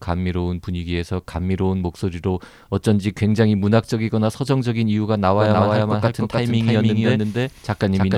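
From 5.38 s to the end, the speech is joined by a second copy of itself running about a third of a second behind and at much the same loudness, a doubled audio track. It likely comes from the same signal being captured again through a slower path. The copy cuts in abruptly, with no decay or room colour, so every syllable sounds twice. On a spectrogram and waveform, each burst of energy repeats at a fixed offset across the full band.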